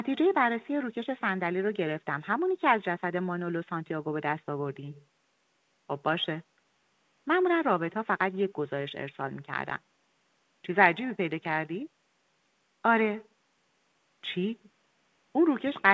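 No technical faults are audible.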